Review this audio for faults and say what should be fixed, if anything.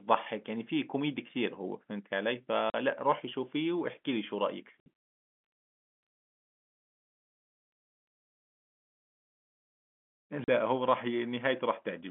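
Packet loss filled with silence: lost packets were replaced by silence, cutting hard-edged holes of 40, 60 and 40 ms into the speech at 2.70, 4.80 and 10.44 s. Enabling packet loss concealment and a jitter buffer at the receiver of this G.711 telephone coding link would fill such gaps smoothly instead of muting them.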